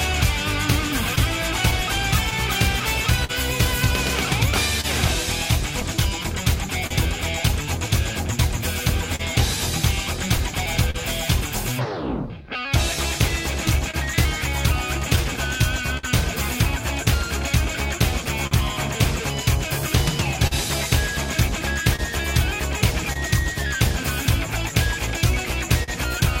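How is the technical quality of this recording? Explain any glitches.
The recording has recurring timing faults: a slow clock drift, ongoing timing corrections, three stretches of scattered short gaps, and one brief stall.

Clock drift between sender and receiver runs through the whole clip. The sender's clock is roughly 3% slow, so the receiver's buffer keeps draining and small timing hiccups recur at uneven intervals.

Repeated timing corrections occur from 1.80 to 24.73 s. To compensate for the drift, the receiver repeats short pieces, adding roughly 100 ms in total. These come through, if at all, as slight, unevenly spaced hiccups.

Scattered short gaps appear in three stretches: 1.15 to 6.92 s (about ten gaps), 9.16 to 16.05 s (about ten), and 20.47 to 25.90 s (about seven). Each lost or late packet is patched by extending the previous sound. The longest patches last around 40 to 50 ms and are heard as brief ticks or smears.

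A short stall from a late packet occurs at 18.47 to 18.53 s. The buffer ran empty, so the last sound was held for 43 ms until the packet arrived. It is heard as a drawn-out moment with a slight buzz or dip.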